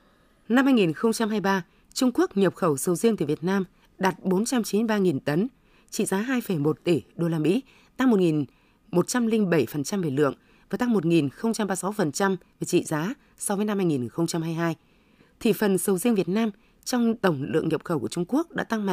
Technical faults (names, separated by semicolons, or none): none